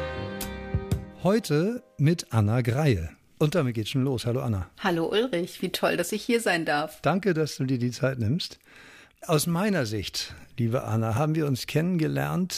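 No technical faults can be heard anywhere in the recording. Nothing in the audio calls for a timestamp or further comment.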